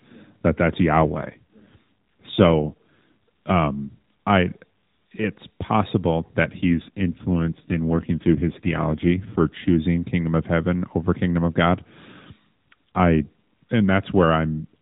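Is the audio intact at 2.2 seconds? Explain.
No, at 2.2 s you're inside an AMR rate drop running from about 1.02 to 2.99 s, just before "um I it's possible". The speech turns rougher and buzzier with no gap or band change, which fits the codec stepping down from 12.2 to 5.9 kbps.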